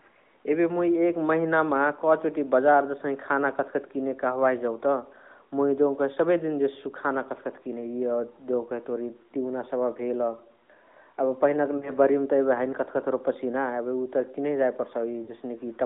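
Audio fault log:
11.78 to 11.92 s and 15.24 to 15.31 s, lost AMR speech frames: the speech briefly smears into a short warble and dips in level, then resumes weak or rough for a moment. Each gap is about 40 ms, which fits two 20 ms frames failing their checksum. The narrowband decoder covers each gap by reusing the last good pitch and vocal tract settings at falling gain, so the sound stretches and fades rather than cutting out cleanly.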